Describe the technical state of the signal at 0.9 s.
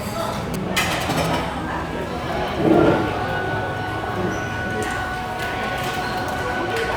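At 0.9 s you're inside a run of GSM signalling bursts, 0.54 to 1.27 s: a nearby phone's radio pulses get rectified, giving a galloping dit-dit-dit of short 217 Hz buzzes just below the sound.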